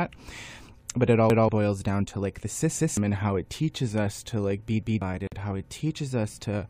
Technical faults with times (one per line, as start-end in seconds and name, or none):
1.30-1.49 repeated buffer
2.79-2.97 repeated buffer
4.83-5.02 repeated buffer
5.27-5.32 gap at a join of encoded pieces